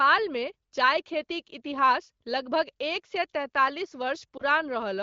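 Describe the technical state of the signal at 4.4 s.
At 4.37–4.42 s, just after "लगभग एक सए तैंतालिस", a lost AMR speech frame leaves a brief warbling dip. One 20 ms frame failed, and the wideband decoder bridged it by reusing the previous pitch and vocal-tract settings at lower gain. Unlike a hard dropout, there is no silent gap or click.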